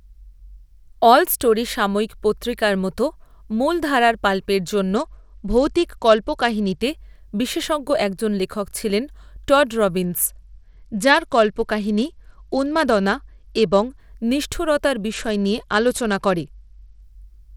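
A Bluetooth SBC bit pool drop hits the speech three times, as the congested link forces the encoder to starve its upper sub-bands and quantise the rest coarsely. From 4.96 to 6.82 s, after "মতো মূলধারার পাল্পের জন্য" and until "বিশেষজ্ঞ একজন লেখক ছিলেন", then 10.05 to 14.0 s after "একজন লেখক ছিলেন টড", and 15.10 to 17.02 s, the treble dulls and gritty noise rises, consistent with a rate near 90 kbps.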